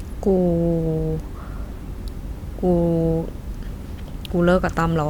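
A speech recording with nothing technically wrong with it.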